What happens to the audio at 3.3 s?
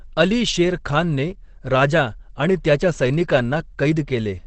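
Opus compression runs through the whole clip, 3.3 s included: speech sounds muffled and hoarse with nothing above 8.6 kHz, likely a low-rate, roughly 12 kbps, speech-mode encode.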